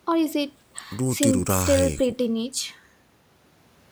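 A short speech recording with nothing technically wrong with it.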